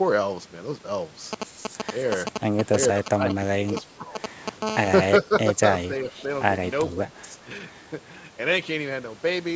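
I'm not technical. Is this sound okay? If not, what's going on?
No. The speech briefly dips at 3.04–3.33, 3.52–4.16, 5.23–5.32, 5.54–5.60, 5.88–6.29, 6.92–7.11 and 7.44–7.50 s. This is speech suppressed in double talk, likely from the call's echo canceller turning this talker down while the other side was also speaking.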